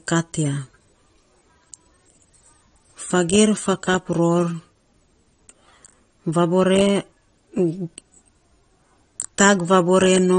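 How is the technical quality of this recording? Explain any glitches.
The technical quality is limited by one fault that runs through the whole speech recording: low-bitrate audio saved at a high bitrate. Nothing exists above about 9.7 kHz, and the speech has a dulled character. The likely cause is a low-bitrate encode, which fits something like 32 kbit/s AAC, later re-saved as high-rate MP3. The second encode is large but cannot restore the high band or undo the first encode's artefacts. On a spectrogram, energy stops along a flat ceiling at 9.7 kHz, with patchy, blocky detail below it.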